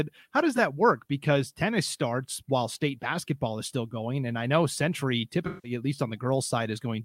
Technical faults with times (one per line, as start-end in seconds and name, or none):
0.56-0.59 AAC frame loss with concealment
5.46-5.71 AAC frame loss with concealment